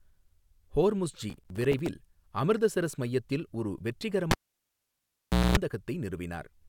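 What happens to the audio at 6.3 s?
Nothing goes wrong at 6.3 s; the speech there is intact, with no dropout, click, distortion or other fault.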